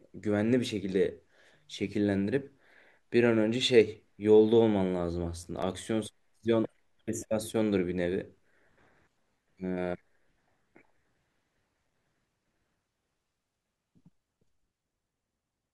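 A short burst of gritty crackle tears through the speech from 5.43 to 5.63 s, a rapid run of tiny hard-edged dropouts rather than one clean gap, and it stops as abruptly as it starts. This is processor overload crackle: the processor fell behind and missed a handful of buffer deadlines in quick succession, each miss leaving a brief slice of silence with sharp edges. The length of each dropout fits buffers of around 5 ms.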